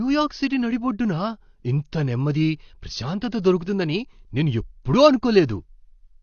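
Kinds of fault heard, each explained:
AAC compression: The speech sounds dull and smeared throughout, with a fizzy, warbling edge on sibilants and sustained vowels and a lowered top end. This plainly audible damage is likely low-bitrate AAC-LC coding, about 32 kbps, where coarse quantisation leaves spectral holes and blurs detail.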